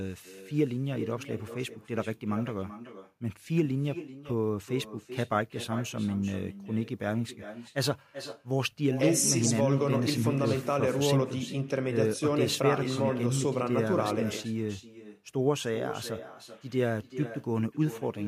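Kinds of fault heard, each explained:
Echo with no canceller: the far end is playing the call out of a loudspeaker, its microphone picks that back up, and nothing on the line strips it out, so the speech returns after the full network round trip. Here every phrase is trailed by a copy arriving somewhere around 400 ms later, sitting about 12 dB below the original and thinner, and it never lets up for the whole clip.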